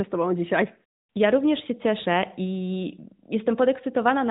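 No technical faults can be heard anywhere in the speech.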